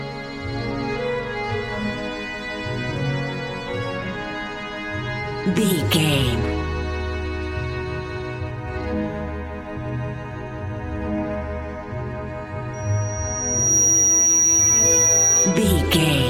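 Loudspeaker feedback squeal runs from 12.73 to 15.70 s: a microphone is hearing its own loudspeaker, and at 5.8 kHz the loop gain tops one, so a thin whistle swells over about a second until it sits roughly 10 dB above the sound.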